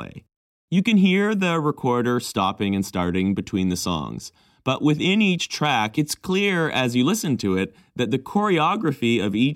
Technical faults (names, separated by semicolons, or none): none